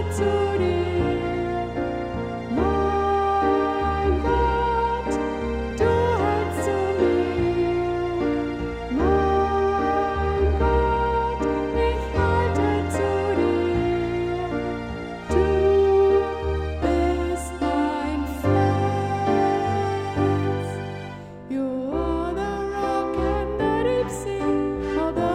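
At 5.71 s the playback device ran short of fresh audio and, with nothing new to send, played its most recent buffer a second time, a repeated buffer. The repeated stretch is about 5 ms, which points to a very small playback buffer. Because the piece is so short, the doubling is heard as a click or brief buzz at the hard join, not as an audible stutter. No audio appears to be dropped, just briefly delayed.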